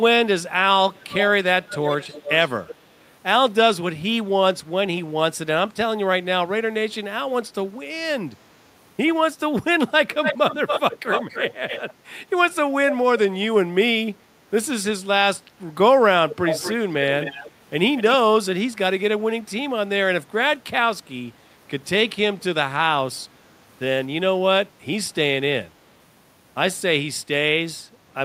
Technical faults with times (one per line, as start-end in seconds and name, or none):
0.95-1.27 echo leak
1.63-2.75 echo leak
10.13-11.93 echo leak
16.29-16.75 echo leak
17.21-17.51 echo leak
17.96-18.16 echo leak